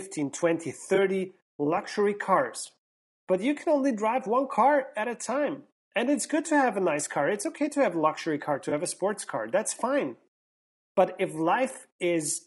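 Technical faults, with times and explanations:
throughout, low-delay AAC compression: plainly rough, grainy speech with noise between harmonics and a dulled top band, likely AAC-ELD at a rate fitting 32 kbps, whose short frames resolve pitch poorly.
0.95–0.98 s and 8.69–8.72 s, AAC frame loss with concealment: brief smeared, noisy patches where about 20 ms, consistent with one lost frame, was rebuilt from the preceding spectrum.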